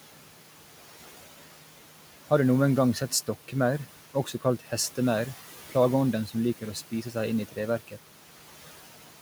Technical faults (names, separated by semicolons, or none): noise suppressor artifacts; speech cut by the noise suppressor